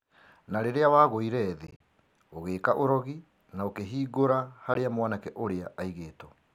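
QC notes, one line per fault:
1.67–1.80 s, Bluetooth dropout: just after "rĩrĩa wagũire", roughly 67 ms of sound vanishes in several short holes scattered over about 133 ms, the longest about 40 ms, which fits a cluster of late packets the headphones likely discarded. The waveform shows flat gaps, the spectrogram thin blank vertical stripes, and the audio resumes already moved on.
4.74 s, Bluetooth dropout: after "ũgĩĩka ũrogi na ũkĩhingũra", a single gap of about 13 ms, consistent with one likely dropped packet. It shows as a brief flat notch in the waveform and one narrow empty column in the spectrogram.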